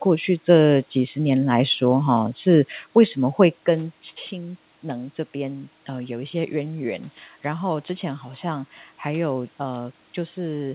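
Nothing stood out on listening to this speech recording.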